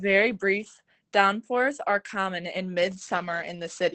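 From start to finish the speech sounds muffled and slightly hoarse, with a faint robotic buzz. This is plainly audible Opus voice compression. The encoder is working in its SILK linear-prediction mode at wideband, so the top of the spectrum is cut near 8 kHz. The excitation is coded coarsely in 20 ms frames, and the degree of damage points to a low bitrate of around 12 kbps.

From 2.77 s, right after "downpours are common in", to the end of the clip, a rough, metallic edge rides on the voice and disappears in the gaps between sounds. This is periodic clock jitter. Interference is wobbling the converter's sampling clock at a rate of around 2 kHz. That places sidebands about 2 kHz above and below every component of the speech, and the higher components are hit hardest, which gives the harsh, grainy colouring.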